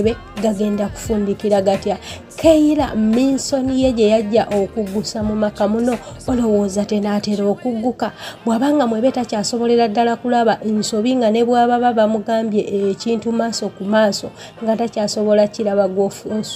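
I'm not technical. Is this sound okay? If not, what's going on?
Yes, it sounds fine.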